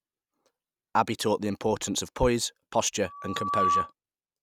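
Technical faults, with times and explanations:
3.05–3.93 s, loudspeaker feedback squeal: just after "the importance of poise" a steady tone at 1.2 kHz appears and swells over roughly half a second into a squeal that ends up somewhat louder than the speech, about 5 dB above it. The microphone is picking up the loudspeaker it drives, and at 1.2 kHz the loop gain exceeds unity, so that one frequency recirculates and grows on its own until it stops at 3.93 s.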